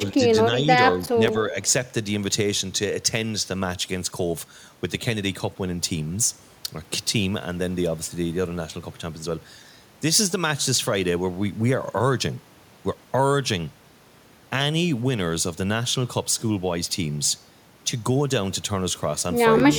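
It's a speech recording, and early on, from about 1.17 to 1.55 s, the talker briefly dips by roughly 5 dB, in bits adding up to around 150 ms. That's speech suppressed in double talk, likely an echo canceller failing to separate the talker from overlapping far-end echo and pulling the level down.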